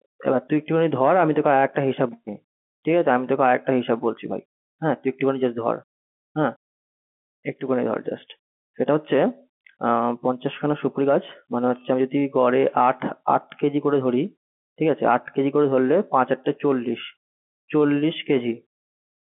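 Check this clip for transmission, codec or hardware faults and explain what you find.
No transmission, codec or hardware faults turn up in this clip.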